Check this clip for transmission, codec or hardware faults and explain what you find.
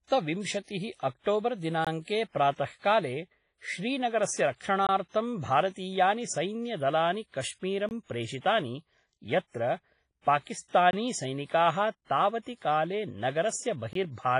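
Two faults: heavy codec damage across the whole clip, and regular dropouts at chunk boundaries.

Throughout, the speech is washy and ringing, with hiss that swells and fades with the signal and nothing above 10.4 kHz. The likely cause is WMA compression at a low bitrate, around 24 kbps. Its long transform blocks smear quantisation noise over tens of milliseconds and drop weak detail.

A gap between chunks appears at 1.85, 4.87 (just before "भारतीयानि सैन्यदलानि"), 7.89, 10.91 and 13.93 s. Each is a hole of about 21 ms, repeating every 3 s. Silence is left at every join.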